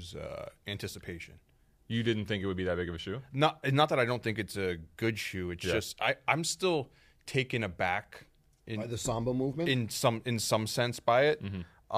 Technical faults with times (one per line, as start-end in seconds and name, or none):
none